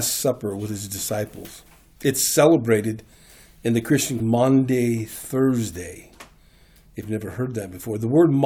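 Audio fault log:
4.19 s and 7.03 s: damaged data in a compressed stream; corrupted frames make the decoder misread the bitstream and lose sync, leaving two brief blips.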